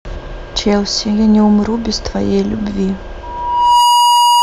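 From 3.23 s to the end there's loudspeaker feedback squeal: a 963 Hz tone swells over about half a second, looping mic-to-speaker, ending a few dB above the speech.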